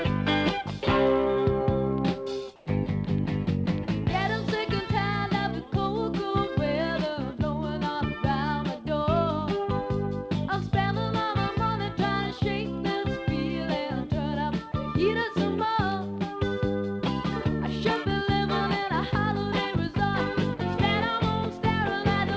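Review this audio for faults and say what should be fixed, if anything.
From 2.56 to 2.66 s the background turns into a flat, featureless hiss, about 2 dB quieter, likely comfort noise in place of the background during discontinuous transmission. To prevent it, disable discontinuous transmission or tune the voice detector so that quiet background is still sent as real audio.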